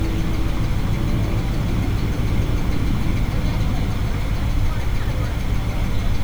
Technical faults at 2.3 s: low bit depth with dither

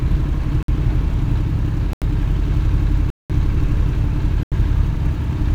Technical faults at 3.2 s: block of digital silence

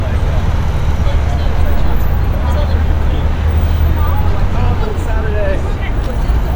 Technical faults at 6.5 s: none

